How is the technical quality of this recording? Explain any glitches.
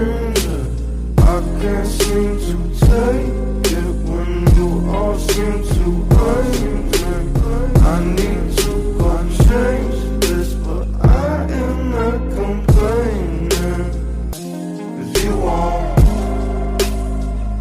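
The recording has one clear fault, a doubled audio track between 5.69 s and 9.41 s. Over that span a second, full-band copy of the sound runs about a second and a half behind the original, roughly 5 dB quieter. It carries no reverberant tail or room colouring and cuts in and out abruptly at both ends. The likely cause is the same signal reaching the mix twice, once directly and once through a slower capture path, leaving two copies out of step.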